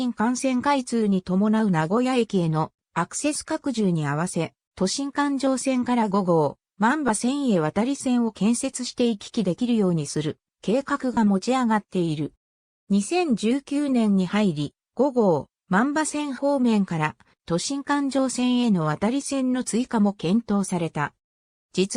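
Two short dropouts from lost LE Audio frames: a tiny glitch at 7.08 s, about 10 ms, which fits a single frame, and a longer smear from 11.14 to 11.17 s, roughly three frames' worth. In each gap the LC3 decoder papers over the hole by replaying the last spectrum with scrambled signs, so the sound briefly goes grainy and noisy instead of cutting out. The light codec compression underneath is just doing its normal job.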